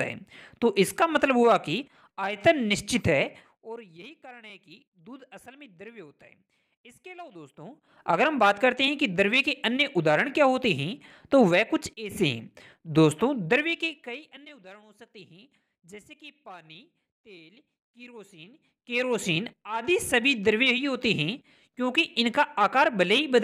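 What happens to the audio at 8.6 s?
Nothing goes wrong at 8.6 s: the audio is intact there, with no dropout, distortion or other fault at that moment.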